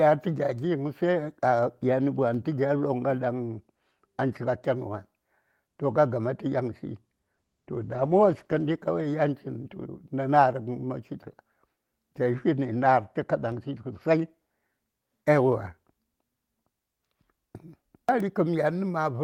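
At 2.34 s a DC step shifts the waveform's zero line, heard as a low thump while the speech carries on unchanged. The offset holds until 13.52 s and then drops back with a second thump. On a waveform the whole trace sits off-centre between those times, and each step appears on a spectrogram as a brief low-frequency mark.

Inside that span, a call bitrate drop starts at 7.35 s, with the Opus encoder falling from 32 to 14 kbps. It stays at the lowest rate for about 1.3 s and recovers by 9.45 s. The speech turns rough and watery there. On a spectrogram the upper detail within the usual 12 kHz band looks smeared and patchy.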